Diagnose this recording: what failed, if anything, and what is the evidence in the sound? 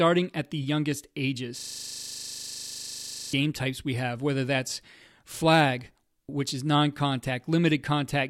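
System hang loop at the driver or buffer stage. After "at the youngest", from 1.59 to 3.33 s, one 40 ms slice repeats 44 times as a 25 Hz buzz. The driver froze while the hardware kept replaying its ring buffer.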